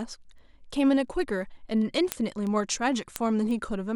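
From 0.38 s to 3.86 s the speech carries word clock ticks. The receiving clock is not locked to the sender's, drifting by something like 70 ppm, so one sample slips about every 0.4 s. The result is roughly ten ticks, each a thin vertical line on a spectrogram and a one-sample glitch in the waveform.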